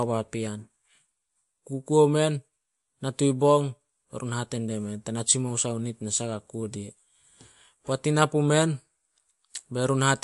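From start to finish the speech carries plainly audible damage, likely from MP3 compression at a low bitrate around 50 kbps. Treble stops dead near 11.3 kHz, a flat ceiling on a spectrogram, and weak frequency lines flicker between frames, giving a watery, swirly texture and smeared attacks.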